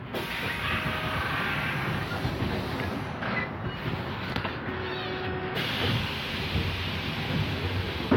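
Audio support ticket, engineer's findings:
Listened through the full clip of sound; nothing stood out on playback and no issue was found to log against this ticket.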